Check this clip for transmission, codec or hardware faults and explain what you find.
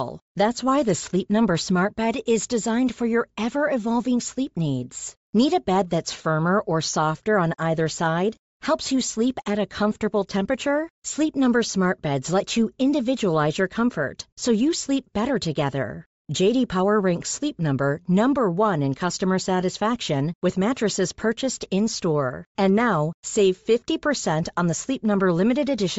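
Two faults are audible: codec damage across the whole speech clip, and one brief dropout.

Bluetooth LC3 compression runs from start to finish. Every stretch of speech has a breathy, grainy upper edge, the sign of a transform codec that discards much of its high-frequency detail and fills those bands with shaped noise. The result is plainly audible and points to a low rate, around 32 kbps, likely from LC3. Unlike a simple low-pass filter, which only dulls the top end, the hiss here stays present but turns rough and noise-like.

Lost LE Audio frames cause a single brief event at 6.24 s, lasting about 7.5 ms, which matches one lost 7.5 ms frame. The decoder fills the gap by reusing the previous spectrum with randomised phase, so the moment is filled in rather than left as a hard click or a gap of silence. A clipping tick would be sharper and more broadband, and a muted packet loss would leave an audible hole.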